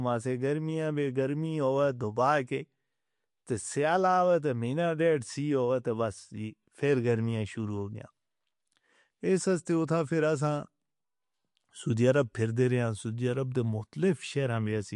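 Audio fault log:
throughout, MP3 compression: treble ends at 11.2 kHz; weak frequency lines flicker between frames, giving watery, swirly speech, likely from a bitrate near 50 kbps.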